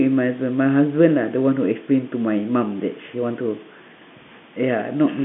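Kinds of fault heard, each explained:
No faults are heard anywhere in this speech recording.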